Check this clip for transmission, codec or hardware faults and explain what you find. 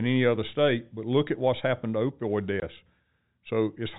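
One transmission fault is present: a short packet loss filled with silence. At 2.60 to 2.62 s, just after "what's happened to opioid", the speech drops out for 20 ms, which fits a single lost packet. The receiver inserted silence instead of concealing the gap, so the hole has abrupt edges. The telephone-band G.711 coding is audible as the 4 kHz limit.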